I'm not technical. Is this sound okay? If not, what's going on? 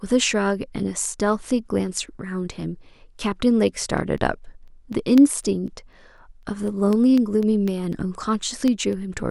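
No. From about 4.18 s to 8.93 s there's a regular ticking under the speech, roughly four ticks a second. These are periodic USB or driver dropouts: something on the computer repeatedly interrupts the audio connection, leaving a tiny silent gap each time.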